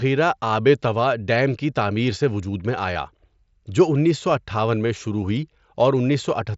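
At 2.94 s, just after "تعمیر سے وجود میں", there is a brief concealed Bluetooth headset packet loss: about 15 ms of the headset link dropped out, which fits a couple of lost packets. The receiver patched the gap in the mSBC-coded speech by repeating a closely matching stretch of the preceding waveform.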